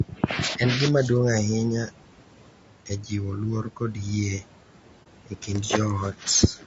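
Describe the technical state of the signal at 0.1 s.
Between 0.09 and 0.23 s, the speech is cut by the noise suppressor. It mistakes part of the speech for background and pulls it down with the noise, by about 10 dB at the deepest point, across roughly a tenth of a second. That speech sounds swallowed and faint, then returns to normal level. A dropout or packet loss would leave silence or a glitch. Here the sound stays continuous but is ducked, and the room noise under it sinks with it.

Noise suppressor artifacts run through this moment as well. The suppressor lowers the bands it treats as steady noise by about 12 dB, frame by frame. The background therefore dips where there is no speech and rises back beneath it. A fixed gate would switch the noise off and on as a whole. This processing works on separate frequency bands.

The same stretch carries a rough, grainy codec character, with noise filling the gaps between the voice harmonics and a top band that sounds thin and synthetic. 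Low-delay AAC compression is the likely cause. Its short frames resolve pitch harmonics poorly, and the damage fits a low bitrate of around 32 kbps. Suppressor artifacts follow the level of the noise. This graininess stays on the voice itself, even where it is loud. The room noise sits about 19 dB below the speech.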